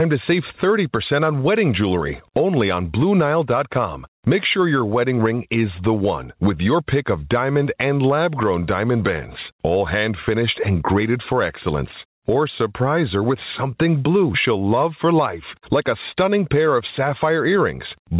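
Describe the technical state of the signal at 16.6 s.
At 16.6 s, as throughout the clip, there is gain pumping: the gain is pulled down by around 10 dB under each loud syllable, flattening the dynamics. The likely cause is excessive input gain driving a fast limiter, heard through a call path band-limited to 4 kHz.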